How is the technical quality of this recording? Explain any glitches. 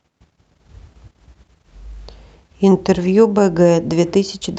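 Nothing here counts as a glitch: the speech has come through an ordinary call codec, so there's the usual coding texture and the high end tops out around 8 kHz, but that's just how a call sounds, and nothing in the recording goes wrong.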